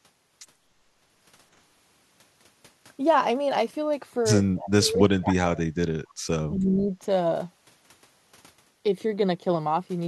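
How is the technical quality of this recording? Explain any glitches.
The recording has three glitches, all between about 4.6 and 7 seconds.

From 4.59 to 4.70 s there is an echo leak. A faint delayed copy of the speech arrives about 266 ms late, roughly 15 dB below the talker. The likely cause is a speakerphone whose echo canceller let some loudspeaker sound through.

From 4.74 to 6.0 s, and again from 6.49 to 6.97 s, the speech is suppressed during double talk. The first dip is deep, close to 40 dB, leaving near-silence. The second is milder, around 10 dB. Both sides were likely talking at once, and the echo canceller turned down the wanted speech too.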